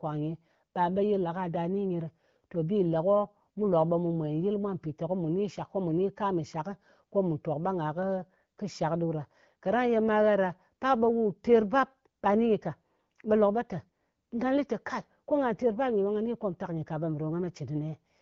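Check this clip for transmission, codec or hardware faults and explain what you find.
No transmission, codec or hardware faults stand out in this speech; it carries the band-limited character of an AMR wideband (HD Voice) link at a rate that sounds consistent with about 12.65 kbit/s, where the coding leaves only light traces.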